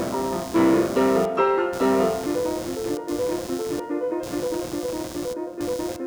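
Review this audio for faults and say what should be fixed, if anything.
Running under the music for the whole clip there's computer activity noise, a buzzy, chirping layer pulsing at roughly a hundred times a second and sitting only about 15 dB below the music. It's the machine's processor or graphics load shifting the ground the audio circuit shares, so the buzz follows what the computer is doing rather than the music. To prevent it, record through an external interface with proper grounding, or a ground-loop isolator, instead of the onboard audio.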